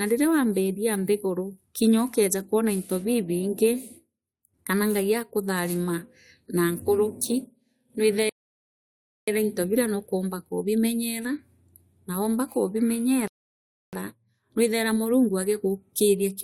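At 8.29 s the speech cuts abruptly to silence, holds for about 0.98 s, then picks up at exactly the point it left off. The same happens again from 13.28 to 13.93 s, a gap of about 0.65 s. These are rebuffering stalls: the player exhausted its downloaded audio and paused until more data arrived. Nothing is skipped, so the gaps simply add time to the playback.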